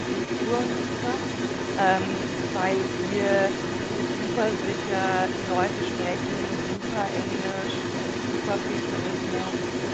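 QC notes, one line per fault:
Throughout: other side's voice leaking through, a second talker about 5 dB under the main speech, likely loudspeaker playback the echo canceller left behind.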